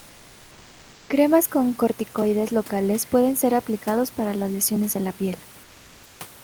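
From 0.0 to 1.09 s and after "lesiones en la piel" (5.63 to 6.19 s), comfort noise replaces the background, likely from Opus DTX: a flat, featureless hiss about 2 to 3 dB quieter, smooth and textureless on the spectrogram.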